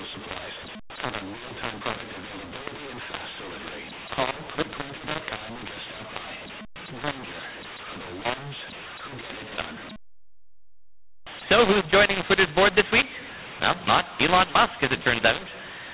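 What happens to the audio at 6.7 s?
At 6.7 s you're hearing the mu-law and A-law mix-up, which runs through the whole clip: the speech was coded as mu-law but decoded as A-law, so levels get scrambled, the quietest samples jump well above silence, and the speech sounds harsh and gritty with noise filling the gaps.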